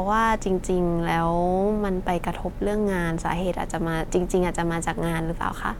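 No technical faults occur at any point in the speech, so there is nothing to describe in time order.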